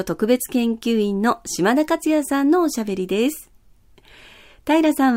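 No technical faults can be heard in this speech recording. The sound continues without any audible disturbance at any point.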